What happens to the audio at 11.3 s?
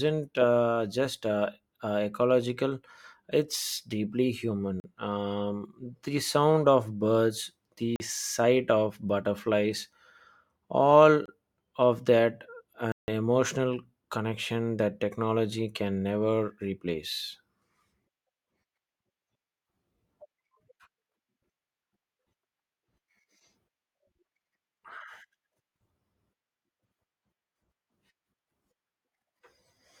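At 11.26 s the speech drops into a block of digital silence lasting about 24 ms, ending at 11.28 s. The samples are zeroed with no fade, so the signal cuts abruptly to nothing and back, leaving a short, audible hole.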